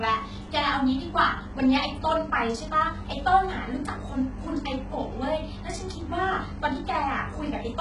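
Right through the speech there's heavy HE-AAC compression damage, likely from a very low bitrate around 12 kbps: treble above 11.1 kHz is absent, and the copied-up highs make s sounds gritty and lispy.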